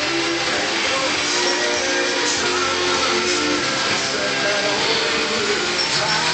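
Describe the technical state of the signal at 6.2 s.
The audio at 6.2 s is intact, with no fault present at that moment.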